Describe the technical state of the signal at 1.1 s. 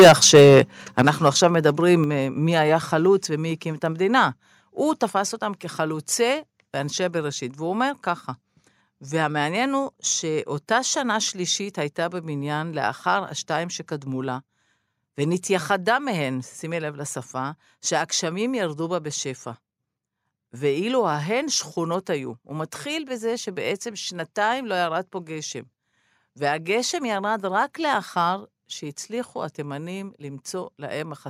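At 1.1 s the sound has a harsh, crackling edge on its loudest peaks. This is microphone overload, running from 0.98 to 1.45 s. The likely cause is an input level set too high, driving peaks about 7 dB past the converter's limit so their tops are sliced flat, affecting a small fraction of samples.

Just before, at 1.02 s, the level of both foreground and background drops abruptly by about 10 dB. This is the microphone volume stepped down, likely the call software reacting to those clipped peaks by cutting the device's input gain in a single step.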